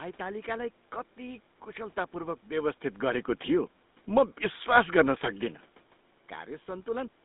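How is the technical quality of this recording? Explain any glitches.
The technical quality is limited by one fault that runs through the whole clip: GSM full-rate codec damage. The speech sounds buzzy and gravelly, squeezed into roughly 200 Hz to 3.7 kHz with nothing above 3.8 kHz. That points to the original GSM codec at a rate that fits 13 kbps. It rebuilds the voice from a vocal-tract model driven by coarse pulses.

The room's background noise and the level changes near 2.5 s and 5.5 s, where the talker moved, are part of the recording rather than glitches.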